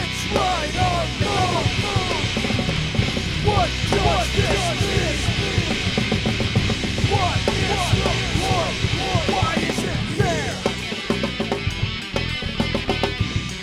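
From 1.22 s to 9.34 s a doubled audio track runs under the sound: a second, full-band copy trails the original by about half a second at roughly 5 dB lower, with no decay or room colouring, so it reads as a clean repeat rather than an echo. It likely comes from the signal being captured again through a slower path, or from an edit holding two offset copies. Both ends switch abruptly. A spectrogram shows every pattern repeated half a second later across all frequencies, and the waveform shows the same shapes duplicated at a fixed offset.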